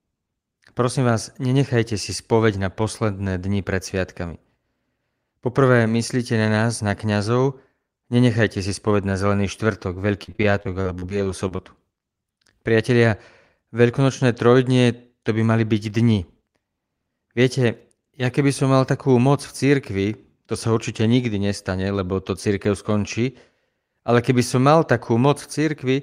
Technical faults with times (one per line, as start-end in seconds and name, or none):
10.23-11.60 repeated packet loss (robotic sound)